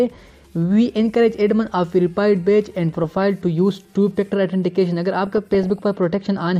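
DAB burbling at 3.04–3.22 s and 5.27–5.83 s: bit errors slipping past error correction corrupt MP2 sub-band data, producing short blips of noise in single sub-bands, seen as flickering isolated spectrogram bands.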